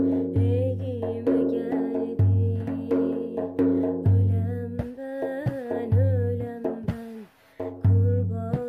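No technical faults can be heard anywhere in this clip.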